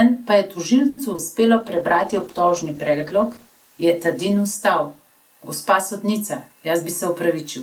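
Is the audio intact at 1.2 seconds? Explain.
No. Short concealed packet loss hits from 1.13 to 1.20 s: audio missed the decoder, so the receiver extended the preceding sound and blended back, leaving a brief smear.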